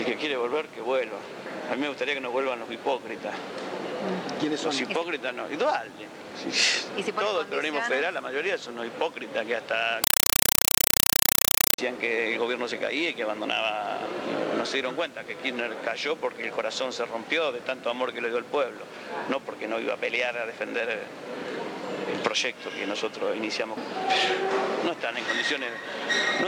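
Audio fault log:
10.04–11.78 s, compressed stream played as audio: an AC-3 stream, which fits about 192 kbps, is passed through as raw samples instead of being decoded, so loud chattering static repeats 31.25 times a second. The waveform shows 4 ms noise bursts separated by flat zero padding. On a spectrogram these appear as broadband vertical stripes.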